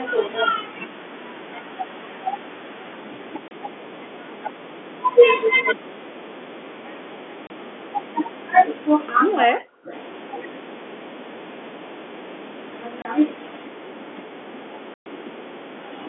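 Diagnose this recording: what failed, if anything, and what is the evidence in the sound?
Short dead gaps with hard edges cut into the speech at 3.48 to 3.51 s, 7.47 to 7.50 s and 13.02 to 13.05 s, each 30 ms long, and a longer 120 ms hole opens at 14.94 to 15.06 s. This is packet loss filled with silence at the network stage. Each missing packet was replaced by digital silence with no concealment, so the waveform drops abruptly to silence and returns just as abruptly. The 30 ms holes fit a 30 ms packet, and the last gap fits four consecutive packets lost.

Between 9.45 and 9.91 s the talker's level sinks, falling at its deepest by about 25 dB across roughly 400 ms. This points to speech suppressed in double talk at the call-processing stage, likely because the far side spoke at the same moment. The echo canceller could not tell the near talker from loudspeaker echo, so it turned the near talker down along with the echo.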